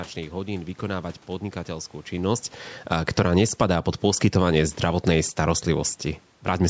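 A speech recording whose level is pulled in two directions by automatic gain falling and automatic gain rising, both acting after the talker shifts position relative to the microphone at around 2 s. From 2.77 s to 6.63 s the gain control, treating the input as too loud, lowers its gain by about 7 dB. The voice and the room noise beneath it sink together, and on a waveform the envelope, including the noise floor between phrases, tapers steadily rather than dropping in one step. Overlapping this, from 3.55 s to 5.53 s, the control raises its gain by about 7 dB, as though the input now seemed too quiet. Speech and background swell together over roughly two seconds, so the waveform widens again, and on a spectrogram the whole band, which ends at 8 kHz from the call's microphone processing, brightens uniformly across all frequencies instead of only where the voice sits.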